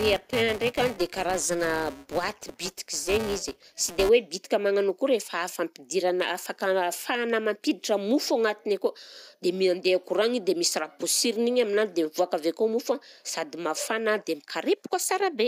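Until 4.1 s, before "hoe bitika magnano akory", a filter restarted on every block ticks a 345 Hz buzz that tracks speech level, unlike hum.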